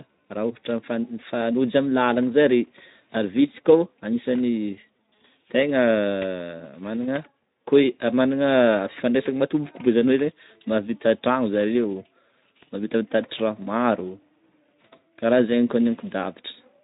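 No technical fault can be heard in this speech recording, which comes through a Speex codec path working as intended with only light coding damage.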